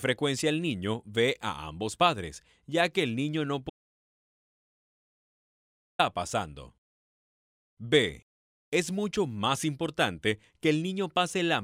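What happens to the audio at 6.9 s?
Nothing goes wrong at 6.9 s; the audio carries on intact through that moment with no break, glitch or change in level.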